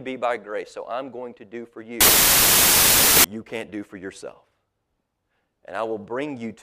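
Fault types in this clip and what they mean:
Wrong sample width: From 2.01 to 3.24 s, between "going to do for" and "you can't do for", the stream is read with more bytes per sample than it was written with, which fits packed 24-bit data read as 32-bit words. Each decoded value mixes bytes from neighbouring samples, so loud broadband noise swamps the speech, which stays faintly audible underneath, running about 1.33 times too fast with pitch raised to match.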